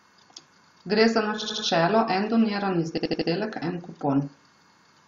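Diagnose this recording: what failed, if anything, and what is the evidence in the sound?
Repeated frames, codec or storage stage: an 80 ms block stutters at 1.41–1.66 s and 2.97–3.29 s, appearing as identical tiled spectrogram slices.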